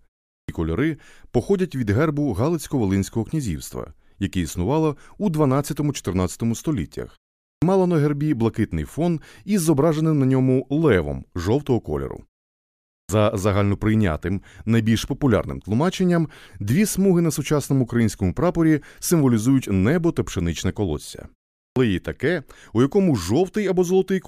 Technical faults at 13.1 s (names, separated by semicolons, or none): clipped start after a pause